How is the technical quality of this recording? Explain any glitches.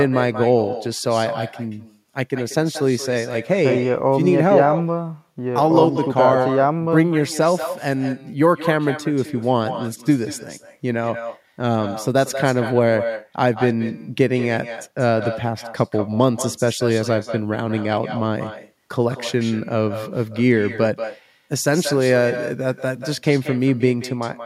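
The recording is compromised by echo with no canceller running through the entire speech clip. The far end's loudspeaker feeds its microphone, and with nothing subtracting that path, every phrase returns about a fifth of a second later, about 11 dB down and thinner. On a waveform each burst trails a smaller duplicate; a spectrogram shows faint copies shifted right.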